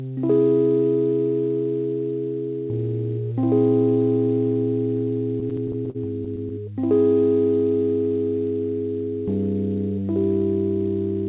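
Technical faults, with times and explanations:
5.40–6.52 s, repeated stalls (stutter): audio packets kept arriving late, so the jitter buffer emptied ten times in quick succession, with no gap longer than 46 ms. Each time the receiver stretched the last bit of sound to cover the wait, about 141 ms of filler in all and roughly 13 percent of that stretch, with nothing actually lost. The sound hiccups and drags through this span. Throughout the clip, nothing reaches above 4 kHz, which fits a narrowband call codec.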